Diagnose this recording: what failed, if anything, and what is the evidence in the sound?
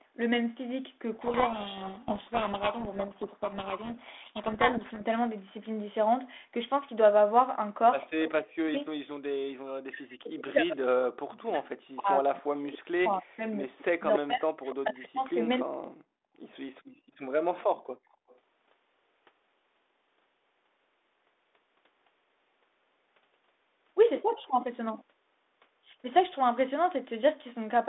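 The codec stage fails first. From 1.14 to 5.03 s the speech is buried under harsh, gritty distortion. This is a codec payload misread. The G.726 code words are being unpacked with their bit order reversed, so each 4-bit difference value the decoder applies is wrong, and the adaptive predictor drifts into noise. The sound clears once packing agrees again, leaving the 32 kbit/s ADPCM with its 300 Hz to 3.6 kHz line band.

From 8.24 to 13.45 s the talker's level repeatedly collapses, by roughly 40 dB at the deepest, for about four seconds in total. Another stretch follows from 13.98 to 15.91 s, about a second and a half in all. This is speech suppressed in double talk, a call processing fault. The likely cause is the echo canceller treating simultaneous talk as loudspeaker echo and clamping the near-end signal with it.

A delayed copy of the voice returns from 13.78 to 14.75 s, about 269 ms behind and about 10 dB down. 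Fainter scraps follow at 16.33 to 16.39 s and 18.29 to 18.37 s, lagging about 290 ms and sitting around 40 and 35 dB below the speech. These are echo leaks, again at the call processing stage. Loudspeaker sound that the far-end canceller likely failed to subtract from its microphone path is sent back down the line.

Between 16.19 and 16.28 s the room background drops out abruptly, by about 35 dB, for roughly 50 ms, then returns. This is background gated by the echo canceller. While the loudspeaker path is active, the canceller's suppressor slams the microphone gain down and releases it shortly afterward. The ambience therefore vanishes for an instant rather than fading, which marks this as call processing and not a level problem in the analogue wiring or converter.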